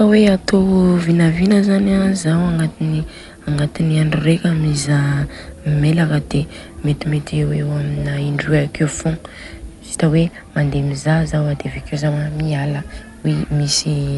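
From the start, the speech has a dull, boxed-in quality with nothing above about 11.4 kHz, and there's a rough, fluttery grit clinging to the voiced sounds. That combination is likely Dolby Digital compression running at a starved rate. It fits something around 64 kbps, where the encoder narrows the band and leaves many frequency lines without real detail, so the decoder patches them with noise. The damage is plainly audible the whole way through.

Between 10.11 and 11.78 s, channel delay (comb filtering) briefly takes hold. One channel lags the other by about a single sample, a tiny fraction of a millisecond. When the two are folded to mono, the shared content cancels at evenly spaced points, the first of them up near 20 kHz. Given the already truncated top end, this comes across as an extra dulling of the top during that stretch.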